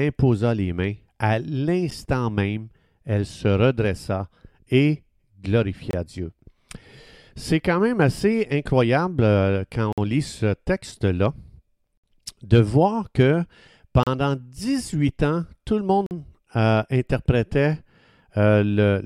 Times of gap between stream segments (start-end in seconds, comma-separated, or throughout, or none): 1.91, 5.91-5.93, 9.93-9.98, 11.97-12.04, 14.03-14.07, 16.06-16.11